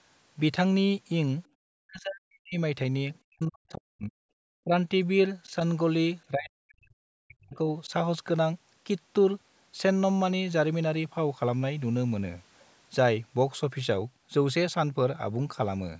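The speech sinks by about 40 dB, nearly to silence, at 1.66–2.57 s, 3.25–4.15 s, 6.3–7.05 s and 7.26–7.69 s, with a brief 35 dB dip at 4.62–4.72 s. This is speech suppressed in double talk, likely an echo canceller muting the talker while the far side spoke.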